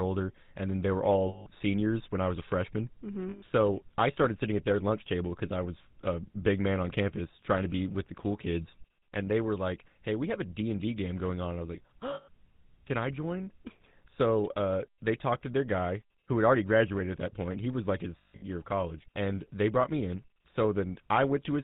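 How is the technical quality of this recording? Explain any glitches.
The quality is poor: the whole clip carries plainly audible telephone-codec damage, with four brief dropouts. The GSM full-rate codec runs throughout, consistent with the 13 kbps full-rate coder. It rebuilds speech from a vocal-tract model driven by sparse regular pulses and cuts everything above 4 kHz, so the speech sounds muffled, buzzy and gravelly.

Lost GSM frames occur at 1.28 s (180 ms), 3.30 s (120 ms) and 12.14 s (140 ms). At 18.18 to 18.44 s the losses are scattered, with the longest run roughly 150 ms. Each gap is filled by repeating the last good frame's settings, which produces a rough metallic ring.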